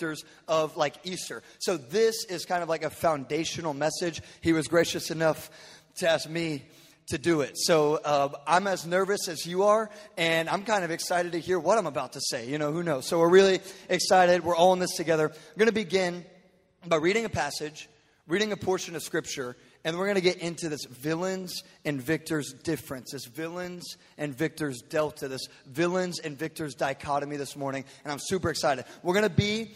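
No technical faults are audible.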